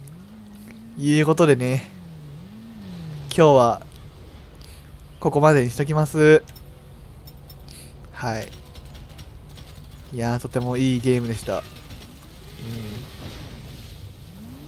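No technical faults are audible anywhere in the clip.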